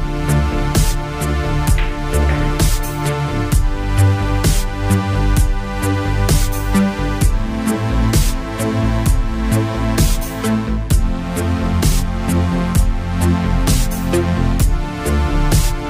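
No technical faults can be heard anywhere in the audio.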